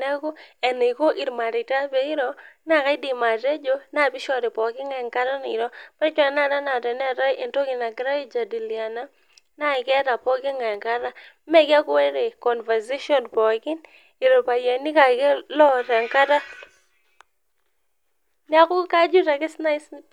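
Periodic USB or driver dropouts run from 9.75 s to 11.49 s, recurring every 0.25 s, around seven in all. At each one, something briefly stalls the path between the audio interface and its driver, and a sliver of the speech, a fraction of a millisecond, is skipped outright rather than replaced with silence. The abrupt splice leaves a small discontinuity in the waveform, heard as a steady train of ticks riding on the speech.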